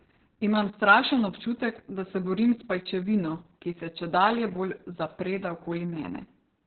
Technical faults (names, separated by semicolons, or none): Opus voice compression